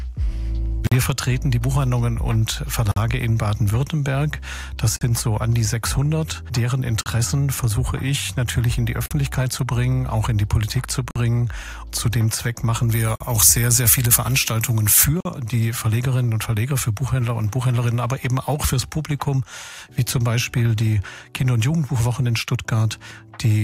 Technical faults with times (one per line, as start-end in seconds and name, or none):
0.87-0.92 gap at a join of encoded pieces
2.92-2.96 gap at a join of encoded pieces
4.96-5.01 gap at a join of encoded pieces
7.01-7.06 gap at a join of encoded pieces
9.06-9.11 gap at a join of encoded pieces
11.11-11.16 gap at a join of encoded pieces
12.89-15.04 pre-emphasis left on
13.16-13.20 gap at a join of encoded pieces
15.20-15.25 gap at a join of encoded pieces